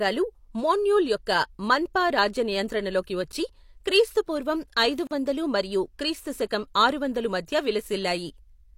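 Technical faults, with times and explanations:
5.07–5.11 s, block of digital silence: the speech cuts to silence for 40 ms with no fade either way, leaving a short hole.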